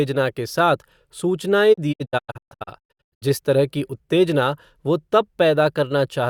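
From 1.72 to 3.24 s the receiver kept losing the digital broadcast signal and muting the corrupted frames, a digital broadcast dropout. The speech breaks into short silent holes, the longest 128 ms, each with a 20 ms fade, losing 832 ms before steady speech resumes at "तरह की उत्तेजना वो".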